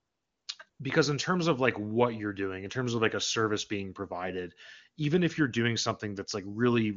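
AMR comfort noise fills 0.00 to 0.47 s and again 0.69 to 0.79 s, both before "because in terms of". The phone treated these stretches as silence and stopped sending speech frames. The receiver then generated synthetic noise from a rough estimate of the background's level and spectral shape. The real room sound is swapped for a smooth, steady hiss that switches on and off at each boundary. The wideband coding around it stays clean.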